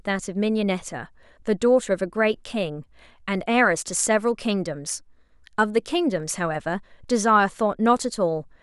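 No technical faults occur at any point in this speech recording.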